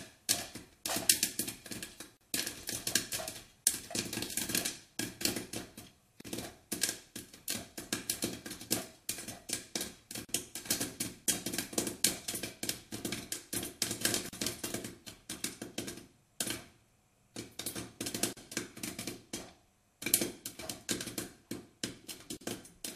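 At 2.17, 6.21, 10.25, 14.29, 18.33 and 22.37 s, the sound cuts out for 38 to 40 ms. These are gaps at a join of encoded pieces, repeating every 4 s. Each piece kept its encoder's start delay and padded final frame. The edges are smeared by the codec. Then the sound resumes where it stopped.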